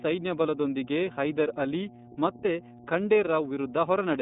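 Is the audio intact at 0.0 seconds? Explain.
No. Mains hum runs from the very start, a steady 60 Hz tone, fairly strong though below the speech, from power-line interference coupling into the signal. On a spectrogram it is a continuous bright line at 60 Hz, and the waveform carries a regular low-frequency ripple even between syllables.

The iLBC codec also affects the audio from 0.0 seconds onward. It codes each 30 ms frame independently, which fits its 13.33 kbps mode, leaving the speech plainly rough and synthetic. On a spectrogram, energy stops abruptly around 3.8 kHz, with little below about 150 Hz.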